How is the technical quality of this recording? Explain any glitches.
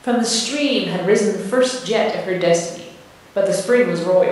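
No technical faults can be heard in this recording.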